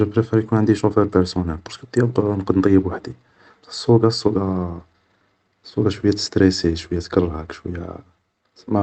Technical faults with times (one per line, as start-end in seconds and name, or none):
0.00-8.83 clock drift between sender and receiver
0.11-8.73 repeated timing corrections